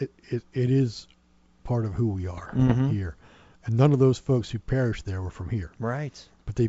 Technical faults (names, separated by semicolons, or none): bit errors on an ADPCM link